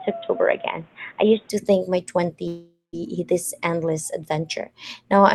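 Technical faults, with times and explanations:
0.0–1.5 s, input switched to a poorer device: the sound starts dull and boxy, with nothing above 3.8 kHz and a faint new noise floor about 30 dB down, then opens up at 1.5 s with no gap or level jump. This likely came from a narrower-band microphone, unlike the Opus call path's 12 kHz limit.
2.47–2.95 s, long network dropout: the last sound is stretched into a fading buzz for about 0.45 s, ending in roughly 0.16 s of silence before the audio resumes with the intervening stretch gone. The gap is likely lost packets, too long for normal brief concealment.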